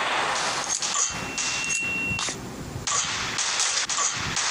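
A single 2.7 kHz tone swells over about a second into a squeal, roughly as loud as the sound, from 0.82 to 2.43 s: loudspeaker feedback squeal, the microphone re-amplifying its own loudspeaker.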